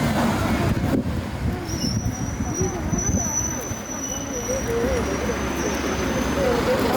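Gain pumping runs through the whole of this recording of sounds, with a gain swing of around 5 dB. The likely cause is input gain set far too high for the microphone, with a fast limiter or compressor clamping down on each loud event and releasing in between. Loud and soft moments sit unnaturally close in level, leaving the sound squashed and breathing.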